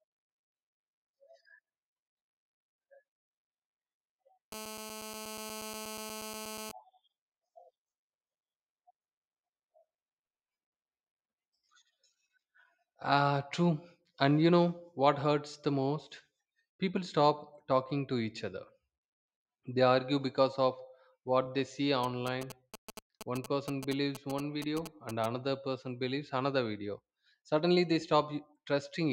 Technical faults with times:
4.52-6.72 GSM phone buzz
22.04-25.26 GSM signalling bursts

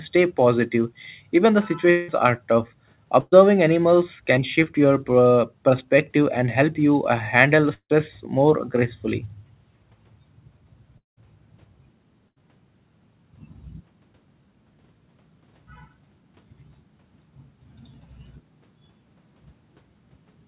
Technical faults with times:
1.90-2.10 long network dropout
3.20-3.34 burst of packet loss
4.64-4.68 short concealed packet loss
7.74-7.92 long network dropout
10.98-11.19 long network dropout
12.29-12.40 burst of packet loss

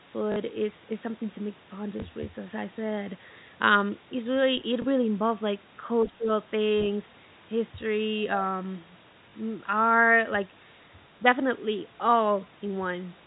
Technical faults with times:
0.32-0.36 packet loss with last packet repeated
2.00-2.02 packet loss with last packet repeated
4.82 packet loss with last packet repeated
6.05-6.11 other side's voice leaking through
6.05-6.29 speech suppressed in double talk
9.30 packet loss with last packet repeated

